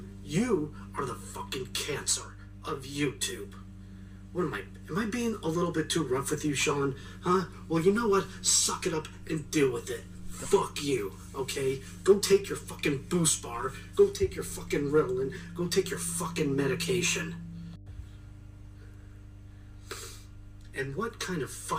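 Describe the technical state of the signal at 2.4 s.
At 2.4 s the signal carries mains hum, as it does throughout: a steady 50 Hz tone roughly 15 dB below the programme, from power-line coupling through a ground loop or nearby transformer. Its fixed pitch and low harmonics set it apart from broadband rumble.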